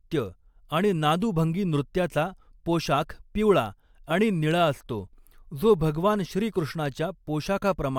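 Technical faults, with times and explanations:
No technical faults detected.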